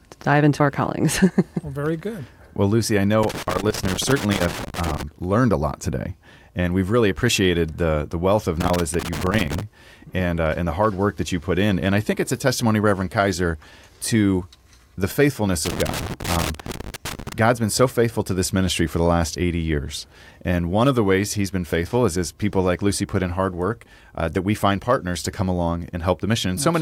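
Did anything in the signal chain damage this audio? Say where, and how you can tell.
Yes. In the analogue wiring, loose connector crackle breaks the speech from 3.23 to 5.03 s before "learned a lot today", from 8.60 to 9.61 s after "the the wealth of", and from 15.65 to 17.33 s after "to the faithfulness". A worn contact chops the signal, which shows as irregular spikes and dropouts on the waveform and broadband vertical streaks on a spectrogram.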